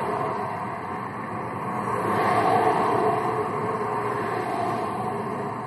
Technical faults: MP3 compression

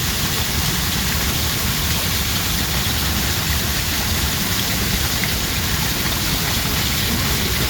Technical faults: none

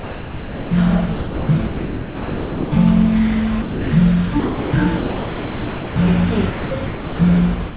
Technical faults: sound dropped by the voice detector; sound chopped by the voice detector

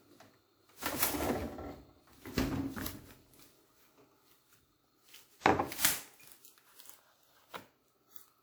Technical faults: generation loss

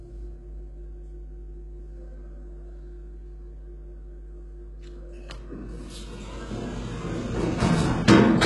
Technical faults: mains hum; HE-AAC compression

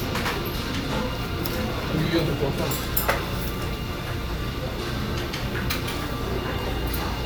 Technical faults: none

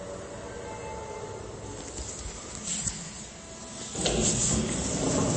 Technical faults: MP3 compression

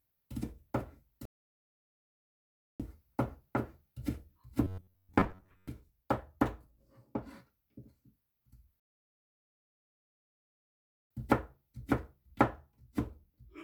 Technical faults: rebuffering stall; robotic sound from repeated short buffers

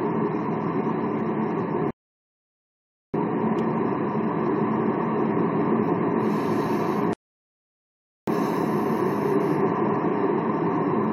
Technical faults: rebuffering stall

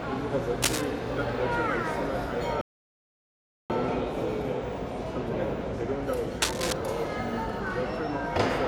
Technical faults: cable scratch noise; playback stall

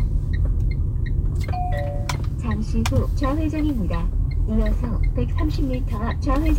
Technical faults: none

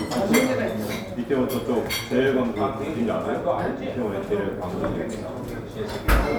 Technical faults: none

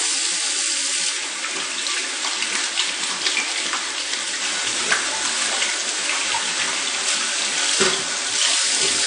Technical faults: AAC compression

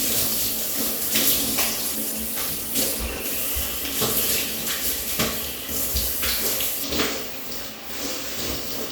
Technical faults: call bitrate drop; channel delay (comb filtering)

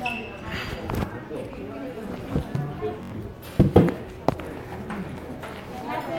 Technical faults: Bluetooth stutter

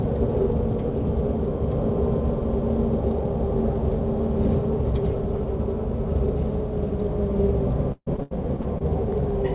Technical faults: repeated packet loss (robotic sound)

